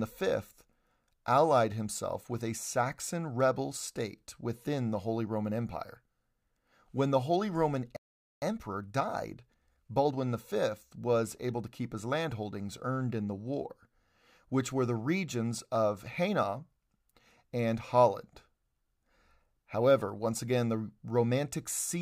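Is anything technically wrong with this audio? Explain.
Yes, two related problems. At 7.97 s the speech cuts out for about 0.45 s until 8.42 s, a playback stall, likely the player starving for data or its thread getting blocked. Then from 8.42 s to 10.22 s there's time-compressed catch-up: the player trims its backlog by splicing out tiny chunks, so speech runs about 1.25 times fast at normal pitch.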